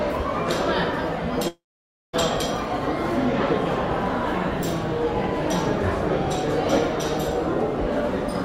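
From 1.48 to 2.15 s a fading buzz gives way to 0.54 s of silence, a blank spectrogram gap, likely from a long network dropout.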